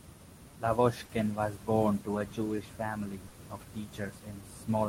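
A speech clip with a faintly unsteady tempo. Tiny hiccups recur at uneven intervals from 0.33 s to 4.42 s, slowing delivery to about 99% speed and adding roughly 50 ms in total. These are repeated timing corrections: the receiver keeps repeating short slivers to keep pace with a sender that supplies samples too slowly. That is clock drift between sender and receiver, with the sender's clock running roughly 3% slow. Because the slow sender lets the jitter buffer drain, it also runs dry twice, at 1.05 to 1.12 s and 3.28 to 3.35 s. Each time, a sound is held unnaturally long with a slight buzzy dip. These are short stalls from a late packet, where the receiver stretched the last sound by 40 ms until data arrived and then resumed where it left off. Nothing is lost, but the delay grows by 40 ms at each stall.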